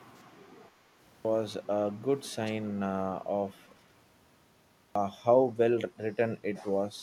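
At 0.95 s speech bursts out of silence with its opening missing, about 0.3 s swallowed after a 0.33 s pause. This is a clipped start after a pause: the output device dozed during the quiet and needed time to wake before sound could pass.

From 2.45 to 2.52 s a brief, faint repeat of the speech surfaces 238 ms behind the original, well below the direct sound. This is an echo leak, likely from a far-end loudspeaker whose echo canceller let a scrap of its own playback return.

At 4.65 s the same clipping recurs after a longer 0.93 s pause, again losing roughly 0.3 s of onset.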